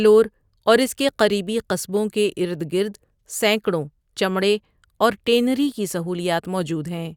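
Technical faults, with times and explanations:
No technical faults can be heard in this speech clip.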